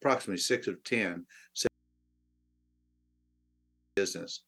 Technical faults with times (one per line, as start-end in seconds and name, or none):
1.67-3.97 audio dropout to a faint residue